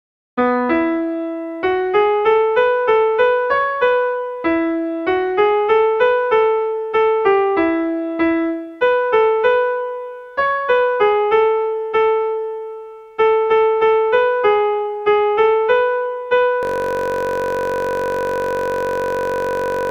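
From 16.63 s to the end, the audio freezes into a system hang loop: a 21.33 ms fragment repeats about 150 times, producing a steady buzz at 46.9 Hz. The driver stalled while the hardware kept replaying its ring buffer, which fits a 1024-sample buffer.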